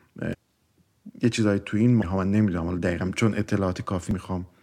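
Damaged data in a compressed stream breaks into the speech three times: from 0.33 to 0.35 s, then at 2.02 s and 4.11 s. Corrupt bytes make the decoder misread frames and lose sync. Each event is a brief chirp or blip.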